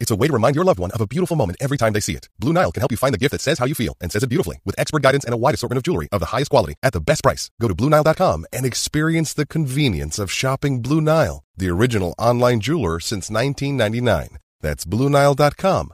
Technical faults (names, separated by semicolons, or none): time-stretched section